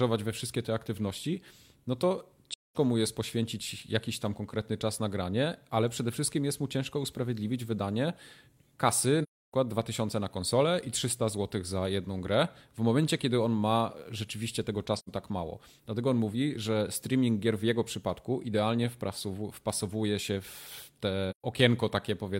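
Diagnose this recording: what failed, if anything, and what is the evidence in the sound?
The codec stage failed with AAC frame loss with muting. The decoder zeroed missing frames, and overlapping windows faded the speech out and back in. Soft-edged holes sit at 2.51–2.76 s (after "te aktywności no to"), 9.23–9.54 s, 14.97–15.10 s and 21.30–21.44 s.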